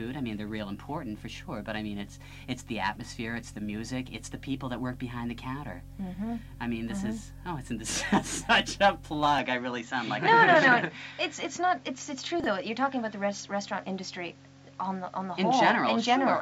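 At 9.38 s the sound abruptly turns duller, with no gap, and stays so to the end. Energy stops at 7.6 kHz on a spectrogram, with a level step of around 5 dB and a faint new noise floor roughly 35 dB down. The likely cause is the input switched to a poorer device.

Between 12.40 and 12.46 s, chunks out of order: a 20 ms chunk plays two chunks late, causing a brief jumbled stutter, seen as hard discontinuities in the waveform.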